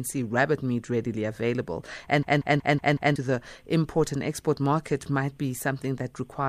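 At 2.23 s a system hang loop begins. The same 186 ms chunk repeats five times, about 5.4 per second, as a stutter until 3.16 s. This fits a frozen 8192-sample buffer, and about a second of audio is lost.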